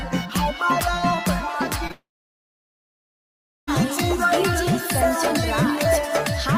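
At 1.87 to 1.91 s there's a short concealed packet loss: about 20 ms never arrived, and the receiver patched it by extending the previous sound, leaving a quick smear. Straight after, from 1.91 to 3.69 s, you get what's likely a long network dropout; the last sound drags on briefly and fades, then about 1.6 s of near-silence before the audio resumes further along.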